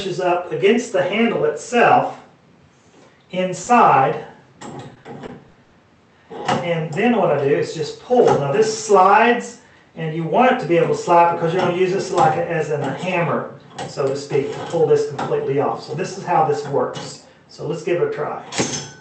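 At 3.63 to 3.68 s comes a short concealed packet loss. About 20 ms of audio never arrived in time, and the receiver spent 30 ms extending the preceding sound and blending back. The result is a single brief smear or wobble. The last 20 ms of that span, from 3.66 s, is also a lost packet rebuilt from error correction.

That rebuilding recurs on its own at 3.86 s and 4.00 s, 20 ms each. The following Opus packet carried a low-bitrate copy, so nothing is missing. Unlike concealment, these moments don't smear or drop out. They just turn briefly rougher and noisier.

From 4.66 to 5.74 s is repeated packet loss with a robotic sound. Five gaps totalling 200 ms were filled by continuation, the longest 80 ms, so about 19% of the stretch is patched. Roughly 40 ms more came back from error correction. The clustering is what sets this apart from the isolated event at 3.63 s. Holes follow each other closely enough to give choppy sound with pieces missing, rather than one wobble.

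Throughout, the call path's Opus coding adds its usual coding noise, with content cut off above 8 kHz. The coding points to about 64 kbps.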